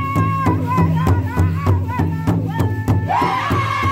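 No technical faults can be heard anywhere in the audio.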